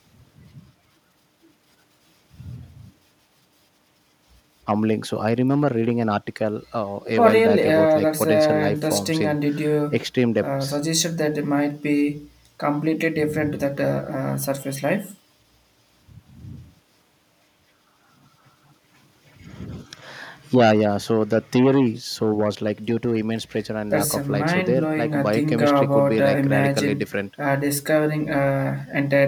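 No technical faults are audible.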